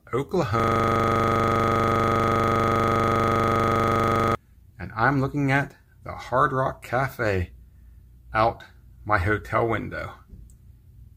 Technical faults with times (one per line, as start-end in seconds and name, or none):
0.60-4.35 system hang loop